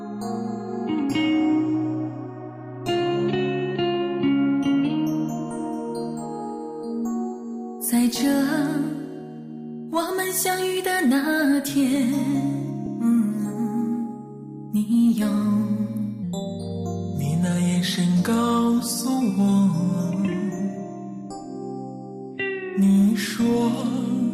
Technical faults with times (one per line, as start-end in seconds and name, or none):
12.86 lost LE Audio frames
16.23-24.33 section at the wrong speed